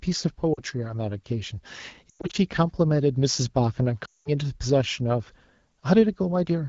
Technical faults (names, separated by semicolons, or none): lost AMR speech frames